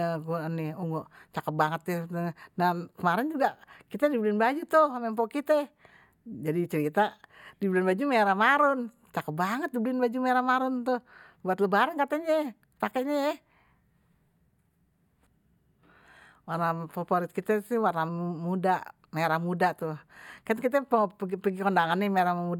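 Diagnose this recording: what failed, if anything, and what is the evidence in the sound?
Nothing in this speech recording points to a failure at any stage, so there's no fault to diagnose here.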